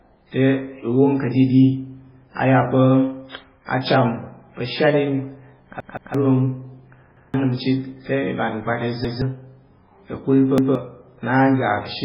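Throughout, the speech sounds dull and watery, with nothing above 5.2 kHz, which is likely heavy MP3 compression at a very low bitrate, around 16 kbps. A repeated buffer causes a stutter at 5.80–6.14 s, where a 171 ms piece plays three times, losing about a third of a second. Single repeats follow at 7.17–7.34 s (just before "nəm chit te i"), 9.05–9.22 s and 10.58–10.75 s. Each has hard joins and drops roughly 150 ms, which fits a late 8192-sample buffer being replayed.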